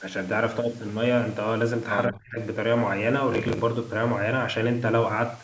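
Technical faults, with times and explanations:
2.08 to 2.39 s, speech suppressed in double talk: the speech sinks by around 35 dB for roughly 0.3 s. Both ends were likely talking at once. The echo canceller could not tell this talker from the loudspeaker echo, so it pulled everything down.
3.33 to 3.61 s, processor overload crackle: a burst of gritty crackle rides on the speech. The processor missed many deadlines in a row. Each late buffer repeated a scrap of old audio with hard edges. The spacing fits buffers of about 10 ms.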